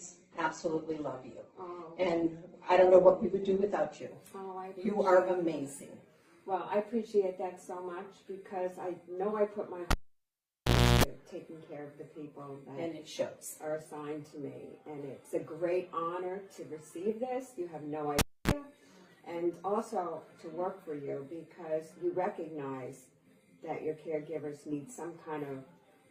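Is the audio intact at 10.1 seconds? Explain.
No. At 10.1 seconds the sound has dropped to near silence, just after a sharp pop at 9.91 s. A harsh 60 Hz mains buzz follows for about 0.34 s, and a second pop brings the audio back at 11.04 s. This is a cable pulled and plugged in: the live lead was yanked out, leaving the input dead for about 1.08 s, and the buzz came while only the bare plug tip touched.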